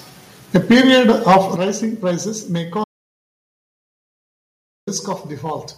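Hard clipping runs through the whole speech clip. The signal is driven about 8 dB past what one stage in the chain can carry, so a few percent of the samples have their peaks sliced flat. Those squared-off tops create high harmonics well above the voice's natural spectrum. The result is a constant harsh fuzz riding on every loud syllable, not just occasional crackle.

Microphone overload appears from 0.55 to 1.38 s, ending just before "rising prices may". Peaks here exceed the ceiling by about 4 dB, and several percent of samples are cut off. The loudest syllables in this stretch gain an extra crackling, splintered edge on top of the background fuzz. The likely cause is an input volume set too high, so the converter ran out of headroom.

Microphone volume stepped down twice, at 0.56 s by about 4 dB and at 1.56 s by about 9 dB, the second just before "rising prices may". Each time the voice and the room behind it both drop in level abruptly, in a single step with no gradual fade. 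The first step comes right as the overloaded peaks begin. This points to call software that likely detected clipping and cut the device's input gain to pull the level back under the limit.

Audio dropout to silence runs from 2.84 to 4.87 s, about 2.03 s, beginning right after "rising prices may". The sound cuts off mid-flow into dead digital silence, with no room tone or noise floor underneath, and then resumes abruptly. Whatever was said during that gap is lost. Silence written for the whole span suggests the input was likely lost for a moment, through a disconnect, a failed link or an accidental mute, while recording carried on.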